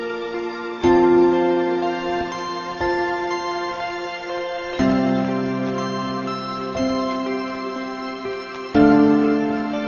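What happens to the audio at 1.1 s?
At 1.1 s you're hearing the wrong sample rate fault, which runs through the whole clip. The samples are being clocked out slower than they were captured, with no conversion, which fits 48 kHz material played back at 32 kHz. So everything runs at 0.667 times normal speed and drops about 7 semitones in pitch at the same time. The sound comes across slow, heavy and noticeably low, like a tape dragging.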